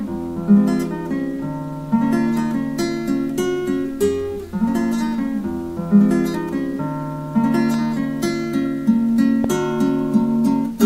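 The audio has two loud pops, from 7.74 to 7.76 s and from 9.44 to 9.47 s, the second peaking about 10 dB above the signal and the first about 5 dB. They're sharp single thumps over unbroken sound, likely voltage spikes from a plug, switch or static.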